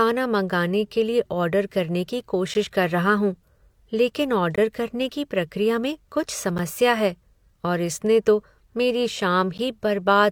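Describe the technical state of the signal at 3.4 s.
At 3.4 s the signal is intact, with no audible fault at that point.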